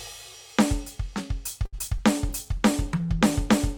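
From 1.65 to 2.01 s the music turns choppy: repeated packet loss (robotic sound). Four gaps, the longest 72 ms, are each patched by stretching the last sound, so about a quarter of the span is filler. The filled holes, not clean dropouts, give it a robotic quality rather than a plain stutter.

At 2.29 s a jitter buffer slow-down begins and runs to 3.08 s. The receiver repeats single pitch periods to rebuild its reserve, adding 49 ms and playing at 94% speed. The music drags but keeps its pitch, which separates this from a tape-style speed drop.

From 2.30 s to the end, a call bitrate drop makes the music rough and muffled, with the top end cut away. This fits the encoder falling from about 128 kbps to around 20 kbps for roughly a second. Unlike packet loss, nothing goes missing. The whole sound is coded more coarsely.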